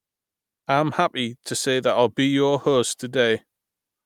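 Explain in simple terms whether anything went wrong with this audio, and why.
Nothing went wrong here: the speech comes through as it should, with no dropouts, glitches or other problems to point to anywhere in the recording.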